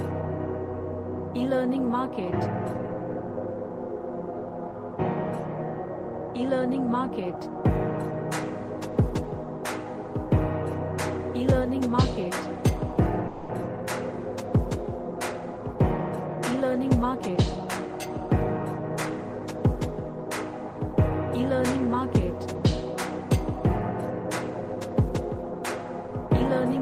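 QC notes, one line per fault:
13.27–13.62 s, call audio freeze: the sound stalls and the last fragment is stretched into a fading buzz or hiss for about 220 ms, then resumes where it stopped. Nothing is skipped, only delayed, which sets it apart from a dropout; the likely cause is late packets emptying the jitter buffer.
15.32–18.18 s, jitter buffer speed-up: the audio runs at about 108% speed with pitch unchanged, as the receiver trims short pitch-period slices to shed roughly a fifth of a second of built-up delay. Unlike resampling, nothing shifts upward in pitch. It simply sounds hurried.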